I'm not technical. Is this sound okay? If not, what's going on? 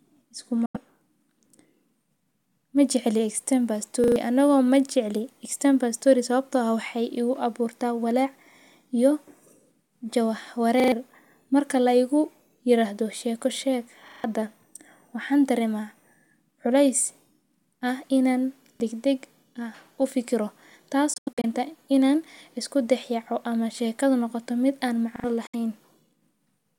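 No, there are two problems. First, a Bluetooth dropout: the sound briefly cuts to silence, likely because wireless packets arrived late, at 0.66 s, 21.14 to 21.45 s (several short gaps), and 25.47 s. Second, a repeated buffer: a tiny slice of sound replays one or more times, like a quick stutter, at 4.04, 10.8, 14.08, 18.76 and 25.16 s, which fits chunks of about 40 ms.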